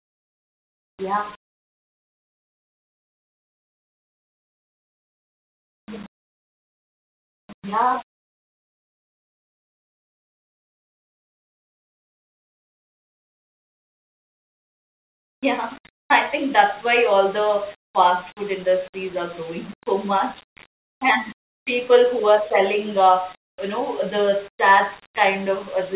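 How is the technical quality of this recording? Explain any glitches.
No glitches can be heard in this speech recording, and the signal stays steady and intact throughout.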